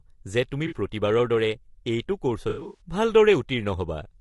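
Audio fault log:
throughout: low-delay AAC compression, likely AAC-ELD at a rate near 32 kbps; short frames resolve harmonics poorly, leaving the speech rough and grainy with noise between harmonics.
0.67–0.75 s: AAC frame loss with concealment, about 40 ms missing; the decoder rebuilds from the previous spectrum, producing a brief smeared, noisy patch in the speech.
2.49–2.81 s: AAC frame loss with concealment, 180 ms lost in gaps over 240 ms, longest about 70 ms; repeated guessed spectra give a longer phasey, smeared stretch.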